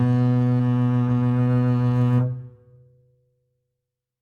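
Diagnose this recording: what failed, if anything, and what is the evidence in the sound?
At 0.6 s the music lurches forward, with roughly a third of a second of material gone and the two sides butted together with no gap. This is a skip ahead at the network or jitter-buffer stage: audio was discarded while later audio was already queued, so playback resumed further along.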